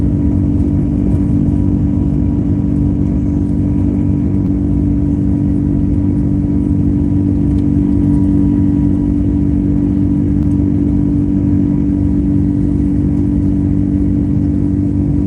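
Two short concealed packet losses show up in this call audio, at 4.45 to 4.49 s and at 10.42 to 10.46 s. Each time roughly 20 ms didn't arrive in time, so the receiver stretched out the last bit of sound and crossfaded back, leaving a brief smear or wobble. The top end stops around 12 kHz, which points to Opus at a fairly low bitrate, something like 20 kbps.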